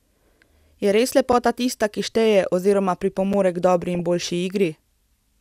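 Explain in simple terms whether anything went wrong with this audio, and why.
The speech has two kinds of fault. There's a gap between chunks at 1.32 s and 3.33 s: tiny 6.5 ms holes, two seconds apart, where pieces of audio were joined. Then there's DAB burbling at 1.72 s and from 3.94 to 4.00 s, brief blips of noise from weak radio reception letting small data errors corrupt the sound.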